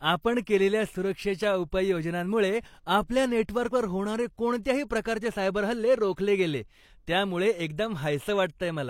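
Pre-echo at 4.63 to 4.65 s, just before "प्रकारचे सायबर हल्ले रोखले": the codec's block-wide quantisation noise spreads about 23 ms ahead of the attack, adding brief hiss and softening its onset.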